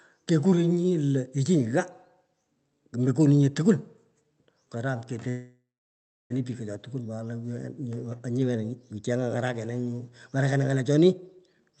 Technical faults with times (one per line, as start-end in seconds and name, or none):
5.29-6.32 call audio freeze
11.70-11.74 jitter buffer speed-up